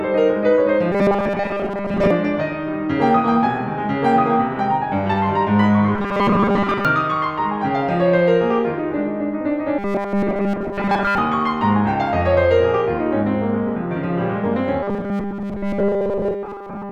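New audio is likely arriving too seldom, so the playback side keeps repeating a very short stretch of what it already has while most of the real music is skipped. This robotic sound from repeated short buffers appears from 0.92 to 2.11 s, 5.95 to 6.85 s, 9.79 to 11.18 s and 14.83 s to the end. The repetition stamps a rigid, metallic 200 Hz buzz over the music, which fits loops about 5 ms long.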